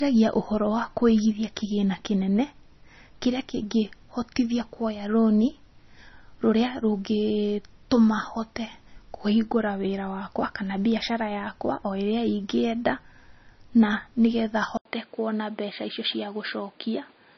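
Throughout, heavy MP3 compression is the likely cause of the watery, swirling texture and treble cut, which fits a bitrate near 26 kbps. Unlike plain band-limiting, the sound also warbles. At 0.72 s, a single sharp click is likely from dropped samples, roughly one sample lost. No sound goes missing, unlike a dropout gap. At 14.77 s, an 80 ms silence precedes a duller, narrower sound, with new background noise about 35 dB below the signal and no level change. This is likely an input switched to a poorer device: the tone changes abruptly at one point rather than degrading throughout.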